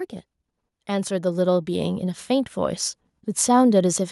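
From 0.7 to 2.87 s, automatic gain rising lifts the level about 7 dB. The control judged the input too quiet. Speech and background swell together.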